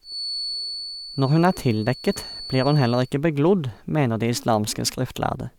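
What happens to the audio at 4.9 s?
Nothing goes wrong at 4.9 s; the audio runs on intact through that moment, with no dropout, click or distortion.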